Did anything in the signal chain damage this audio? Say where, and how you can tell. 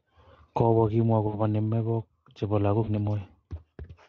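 Yes, at the network stage: VoIP packet loss concealed by the speech codec, in two places. From 1.27 to 1.37 s and again from 2.83 to 2.90 s, the speech smears into a buzzy tone or coloured noise that fades. Those gaps are about 60 ms and 40 ms, which fits three and two lost 20 ms frames. The Speex decoder repeated its last pitch and filter at falling gain, and the sound stays weak or distorted briefly after the packets resume.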